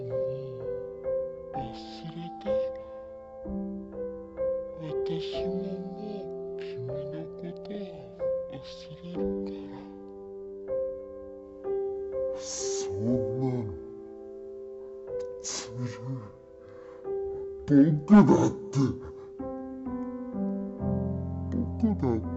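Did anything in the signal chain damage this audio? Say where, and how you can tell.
Yes, at the sample-format conversion stage: a stereo read as mono fault. The whole clip plays at half speed and a full octave low, because the interleaved left and right samples were read back to back as one channel, doubling every stretch of sound.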